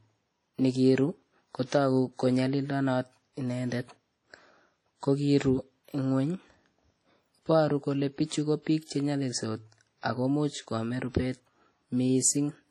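From the start and through the whole speech clip, the sound has a ringing, washy quality, with a hiss that swells and fades along with the speech. Nothing is present above 18.2 kHz, and the damage is heavy. This is likely WMA compression, which fits a low bitrate around 32 kbps. The transform blocks are long enough to spread quantisation noise across tens of milliseconds, and weaker spectral components are dropped to zero.

At 8.84 s, just after "kole pichu ko piik", there is pre-echo that lasts until 8.89 s. A short hiss runs about 46 ms ahead of a sharp attack, and the attack itself sounds blunted and smeared. The onset fell late in a transform block. The encoder spread quantisation noise sized for the loud onset evenly over the whole block, so that noise also fills the quiet stretch before the attack.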